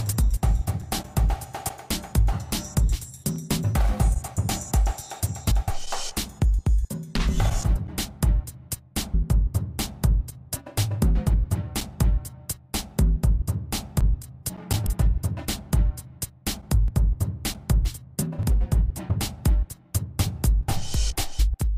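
At 5.50, 7.75, 9.13, 14.85 and 18.38 s, compressed frames are skipped. Runs of whole 26.1 ms frames are missing or were rejected by the decoder, so the sound jumps ahead by 0.15 to 0.3 s. From 20.43 s to the end, a doubled audio track appears, likely from a second, slower capture path. A full-band copy about half a second late and about 5 dB quieter starts abruptly, with no room colour. One more skip of roughly 300 ms occurs at 21.38 s.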